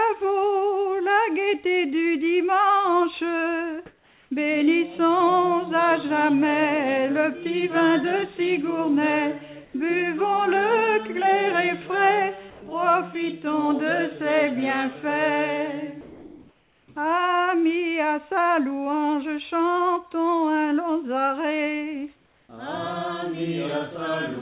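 Comfort noise in place of the background appears at 3.86 to 4.31, 9.65 to 9.74, 12.50 to 12.62, 16.01 to 16.88 and 22.16 to 22.49 s. The real background becomes steady, featureless noise. It drops by up to about 7 dB. Discontinuous transmission is the likely cause.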